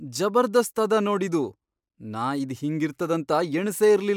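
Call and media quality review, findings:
Nothing to flag here; the speech comes through without any audible faults.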